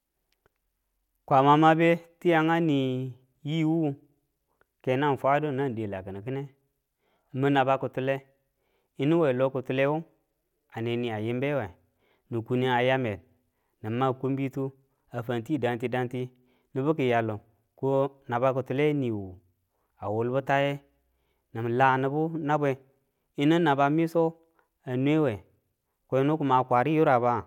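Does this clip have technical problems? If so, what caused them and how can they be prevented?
No, no technical problems here.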